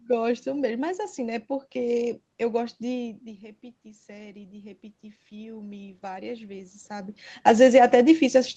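From 2.98 s to 7.24 s, automatic gain rising lifts the level by about 8 dB after the input dropped about 15 dB. Room noise swells with the voice, unlike a talker simply moving.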